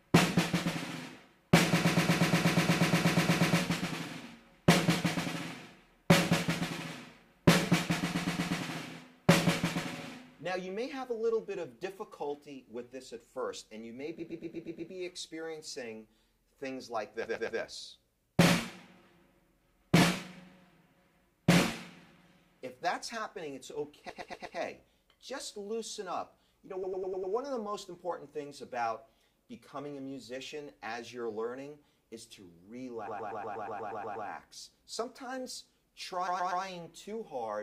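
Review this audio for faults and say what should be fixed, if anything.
Repeated frames at 1.77–3.57, 8.09–8.57, 14.19–14.91, 17.23–17.59, 24.09–24.57, 26.83–27.33, 33.07–34.27 and 36.27–36.63 s: a 120 ms block (100 ms at 26.83 s) of compressed frames is replayed three to fifteen times. This is heard as a stutter, and it adds 5.9 s in total. To prevent it, fix the writer or transport so that each encoded frame is written or sent exactly once, with no retransmitted or duplicated blocks reaching the decoder.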